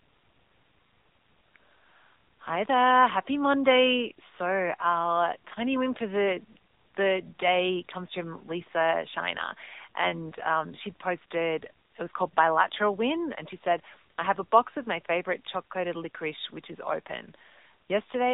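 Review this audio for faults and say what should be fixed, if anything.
The whole clip went through the AMR narrowband mobile codec at a low mode, likely around 7.95 kbps, so nothing above 4 kHz survives and the speech sounds plainly buzzy and synthetic. To prevent it, carry the call over a wideband path or capture the audio before the mobile network encodes it. The faint room noise, about 46 dB below the speech, is part of the recording and needs no fix.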